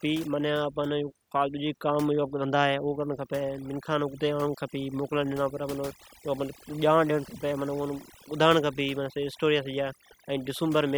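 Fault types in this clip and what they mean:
overdone noise removal: a noise reduction stage was pushed too hard, cutting any frequency band near its noise estimate almost to nothing, so the background in this speech drops and breaks up into twinkling specks.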